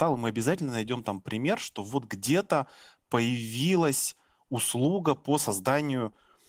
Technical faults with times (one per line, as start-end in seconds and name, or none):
none